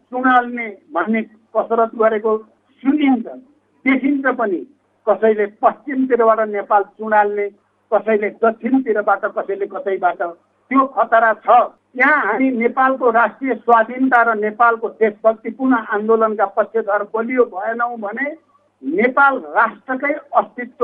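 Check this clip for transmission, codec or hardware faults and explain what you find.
Nothing wrong can be heard anywhere in this recording.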